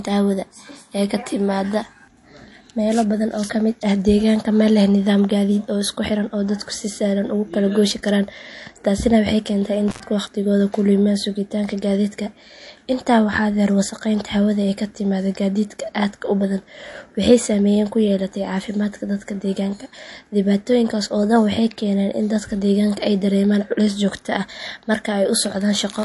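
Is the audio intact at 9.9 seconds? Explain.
No. An intermittent contact breaks the signal from 9.88 to 10.03 s: a loose connection opens for about 95 ms, so the sound drops out, with crackle at the edges and faint hiss underneath. Codec damage is also plainly audible at this point, with nothing above 11.3 kHz, likely from MP3 encoding at 48 kbps, which discards weak frequency detail.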